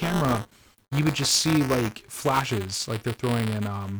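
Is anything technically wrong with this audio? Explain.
Yes. The speech carries buffer tearing throughout the clip. The writing side and the reading side of the playback ring buffer have drifted into overlap, so each period contains a small slice, roughly a twentieth, of audio from about 20 ms earlier, spliced in with hard edges. Those discontinuities repeat at 200 Hz, which points to a period of about 5 ms. The result is a steady robotic buzz riding on the speech, present whenever there is signal and gone in the gaps.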